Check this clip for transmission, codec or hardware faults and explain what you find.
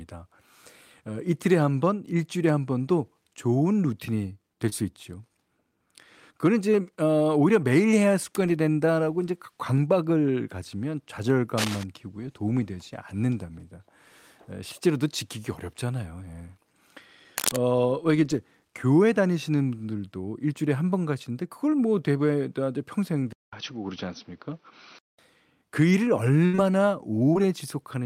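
Six faults are audible in this speech clip, of four kinds.

Short concealed packet loss occurs at 4.69 s and again at 27.33 s. Each time about 20 ms of audio never arrived. The decoder extended the preceding sound to cover the gap, then rejoined the real signal. Each one is heard as a tiny smear or wobble.

Cable scratch noise appears from 11.58 to 11.84 s and from 17.37 to 17.57 s. It is a dense, ragged rustle only slightly below the speech, about 5 dB down. A worn cable or connector shifting under movement is the likely cause.

An input switched to a poorer device is heard from 23.33 to 25.19 s. There is about 200 ms of silence at the switch. After it the sound loses everything above 6.1 kHz, turning dull and boxy. The level shifts by around 5 dB, and a new noise floor sits roughly 45 dB below the signal. The likely cause is the system changing to another microphone or a headset's call profile.

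A burst of packet loss runs from 26.45 to 26.55 s. About 80 ms went missing, and roughly 78 ms of it was filled by extending the last sound while fading it out. The audio resumes past the gap, with that stretch lost.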